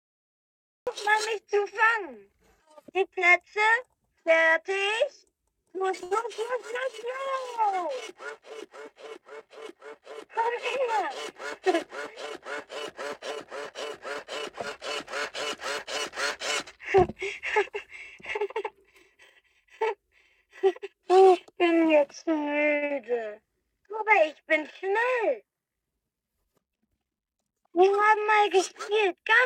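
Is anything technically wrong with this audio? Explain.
Yes, the audio has four kinds of transport and capture fault.

Cut-off start: the file is digital silence until 0.87 s, then enters abruptly mid-sound with no attack or fade, because capture began late.

Short stall from a late packet: at 6.03 to 6.13 s and 22.75 to 22.84 s, the jitter buffer ran dry. The receiver held the last sound for 75 ms and then 65 ms, audibly overextending it before resuming without loss.

Short concealed packet loss: at 22.86 to 22.92 s, 60 ms never arrived. The decoder extrapolated the preceding sound, then crossfaded back, producing a brief smear or wobble.

Jitter buffer speed-up: from 16.95 to 19.04 s at 103% and 24.83 to 25.83 s at 107%, the receiver trimmed pitch-period fragments totalling about 70 ms each time, so the audio runs faster at unchanged pitch and sounds hurried in the second stretch.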